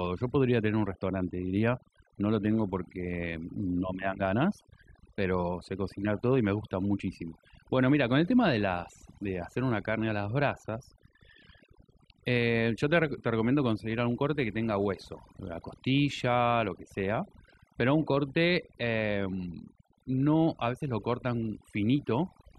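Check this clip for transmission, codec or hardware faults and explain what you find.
One fault runs throughout this speech: overdone noise removal. An over-aggressive denoiser gates bands near its noise estimate, stripping quiet speech detail and dropping the background toward near-silence. On a spectrogram, the background shows isolated flickering specks and a ragged, hollowed-out upper range.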